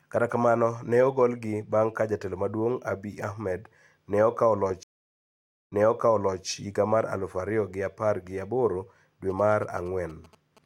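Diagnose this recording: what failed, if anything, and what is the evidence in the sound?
At the network stage, a stream reconnect runs from 4.83 s to 6.46 s. The speech cuts off into about 0.88 s of silence, then picks up 0.74 s earlier than where it broke, so a short stretch is heard twice. The connection dropped, the player reconnected and started a fresh decoder partway through the stream, and the server resent a burst of already-delivered audio, which explains the backward jump instead of a gap.

In the analogue wiring, GSM signalling bursts appear from 9.30 s to 10.59 s. They sound like a galloping pattern of short buzzes at 217 Hz, sitting roughly 25 dB below the speech. A nearby 2G phone was sending brief groups of radio bursts while signalling to its network, and some part of the audio circuit rectified that RF into the signal path.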